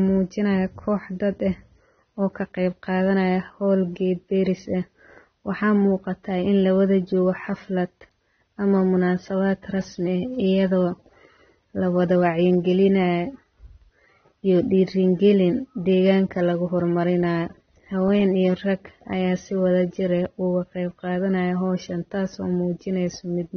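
Speech runs the full clip with a dull, smeared sound and nothing above about 6.3 kHz, most likely from AAC compression, which fits AAC-LC at around 24 kbps. The damage is plainly audible: sibilants turn fizzy and sustained sounds warble as the encoder starves bands of bits. Unlike a simple low-pass filter, which only removes the top cleanly, this also leaves a swirling, grainy texture inside the remaining band.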